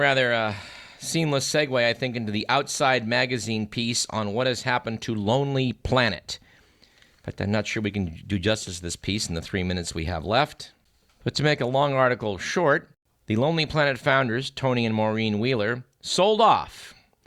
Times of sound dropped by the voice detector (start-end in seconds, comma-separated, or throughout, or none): none